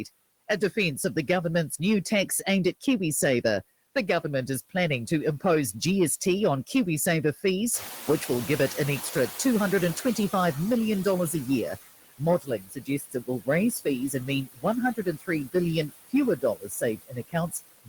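All through the clip the background breathes with the speech, dropping away in the gaps and swelling back under each phrase. These are noise suppressor artifacts. The suppressor estimates the steady noise in each frequency band and pulls those bands down frame by frame, here by about 16 dB.

Around 7.5 s the room noise steps up by about 12 dB and settles roughly 13 dB below the speech. From 7.73 to 11.56 s that louder background comes through too strongly at first and then gradually sinks. This is the noise suppressor catching up. Its noise estimate still reflected the quieter room, so it under-cut the new level and took about 3.8 s to adapt to a reduction of about 13 dB.

Later, parts of the speech itself fade or sound swallowed. This is speech cut by the noise suppressor, which misjudged those speech components as noise and turned them down with the background. From 12.09 to 14.65 s, roughly a second in total is pulled down by as much as about 20 dB. 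From 14.96 to 15.55 s, about a fifth of a second drops by up to about 18 dB. From 15.89 s to the end, dips reach about 20 dB.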